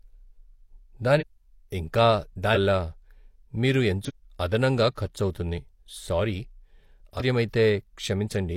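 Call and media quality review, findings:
Damaged data in a compressed stream: short glitches at 1.16–1.23, 2.51–2.58, 4.04–4.11 and 7.16–7.22 s, each about 65 ms. Decoder hits corrupt bytes, loses frame sync and jumps to the next good header.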